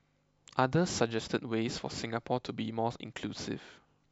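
A short speech recording, with no technical fault to be heard in it. Nothing in the audio calls for a time, a value or a cause to be given.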